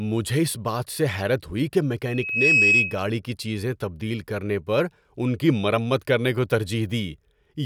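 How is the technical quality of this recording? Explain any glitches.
The recording has one clear glitch: a loudspeaker feedback squeal from 2.04 to 3.03 s. A microphone was picking up its own loudspeaker, and at 2.6 kHz the loop gain exceeded unity. That tone swells over a fraction of a second to roughly 10 dB above the speech. On a spectrogram it shows as a bright horizontal line, and the waveform envelope balloons.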